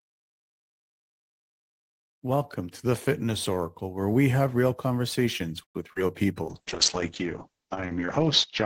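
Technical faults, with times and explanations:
5.63–5.77 s, call audio freeze: The speech halts for just over a tenth of a second. The last sound carries on briefly as a fading buzz, then about 100 ms of near silence follows. This is likely a jitter buffer running empty while packets were held up in transit. When they arrive, the speech resumes where it stopped. Nothing is lost, but everything after this point sits about 114 ms later.
5.93–5.98 s, short concealed packet loss: A tiny smear or wobble is heard here. About 20 ms of audio never reached the decoder in time. The receiver covered the hole with roughly 29 ms of synthesised sound, extended from what came just before. It then blended back into the real speech.
6.43 s to the end, call bitrate drop: The speech turns rough and muffled and stays that way. The encoder was pushed to far fewer bits, which fits a fall from around 40 kbps to 7 kbps. 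The lowest rate lasts about 1.7 s. At that rate Opus codes the speech coarsely and narrows the audio band from 20 kHz to 8 kHz. That removes the crisp upper detail and adds a watery texture.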